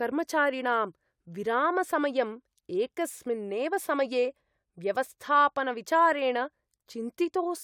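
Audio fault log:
Nothing stood out on listening to this speech recording.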